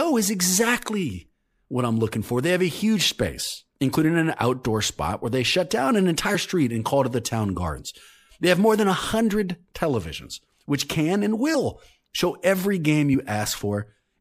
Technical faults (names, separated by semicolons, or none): compressed frames skipped